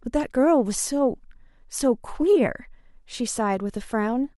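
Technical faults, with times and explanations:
Nothing technical stands out anywhere in this bit of speech, so there's no fault to list.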